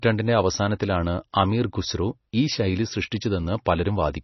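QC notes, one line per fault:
throughout: MP3 compression. Watery, swirly sound with nothing above 5.9 kHz and metallic s sounds, likely from a heavily squeezed MP3 encode near 24 kbps.
1.33 s and 3.65 s: pre-echo. A short hiss of 11 and 13 ms precedes each sharp attack, as the codec smeared block noise into the quiet before.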